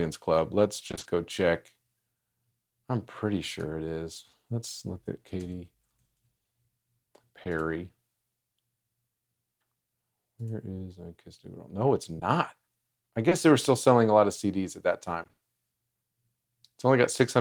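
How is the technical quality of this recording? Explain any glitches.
The speech has audible network glitches: two choppy bursts and three brief smears.

Repeated packet loss (robotic sound) occurs at 0.87–1.07 s and 15.23–15.43 s. Repeated 20 ms holes, patched by extending the preceding sound, fill half of each span, producing a choppy texture rather than one isolated blip.

Short concealed packet loss occurs at 7.43–7.47 s, 12.19–12.23 s and 13.29–13.33 s. A single missing 20 ms piece is bridged from the last sound and blended back, leaving one brief smear or wobble instead of a sustained robotic stretch.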